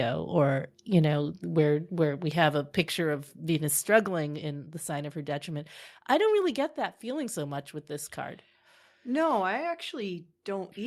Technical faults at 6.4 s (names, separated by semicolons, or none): microphone volume stepped down